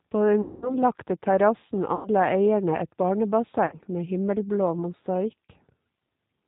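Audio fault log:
Throughout, G.729 codec: the speech passes through G.729A at 8 kbit/s, and the damage is plainly audible. Each 10 ms frame is rebuilt from a vocal tract filter, a pitch predictor and a handful of pulses rather than from the waveform itself, so the voice comes out rough and faintly synthetic. Everything above 4 kHz is missing, which leaves sibilants dull and the whole sound narrow.
0.42–0.75 s, 1.95–2.09 s, 3.66–3.78 s and 5.47–5.51 s, VoIP packet loss concealed by the speech codec: about 200, 100, 60 and 20 ms of audio are missing, which fits runs of lost 20 ms packets. In each gap the decoder keeps extending its last pitch and filter at falling gain, so the sound is stretched into a buzzy tone or a coloured noise that fades. Because each frame depends on the one before, the voice stays weak and distorted briefly after audio returns, so each disturbance outlasts the lost span.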